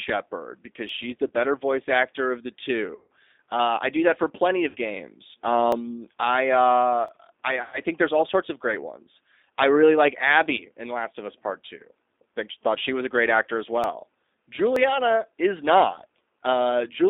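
Throughout, the speech passes through a G.729 codec at 8 kbit/s, rebuilding the voice from a model. That confines it to about 250 Hz to 3.7 kHz and leaves a plainly rough, synthetic tone.

At 0.89 s, a sharp single click sounds, likely from dropped samples, where under a millisecond of waveform vanished and the signal jumped.

At 1.27 s, VoIP packet loss concealed by the speech codec begins. About 20 ms of data never arrived, so the decoder extrapolated its last pitch and filter, giving a brief buzzy smear.

Longer concealed losses follow at 2.95 to 3.09 s (140 ms) and 4.68 to 4.76 s (60 ms). Each time the voice stretches into a fading buzz and stays weak after returning.

Further clicks from dropped samples occur at 5.72 s and 7.08 s.

From 7.62 to 7.79 s, about 100 ms of packets were lost, and the concealment again drones and fades before the speech recovers.

Final dropped-sample clicks come at 13.84 s and 14.76 s.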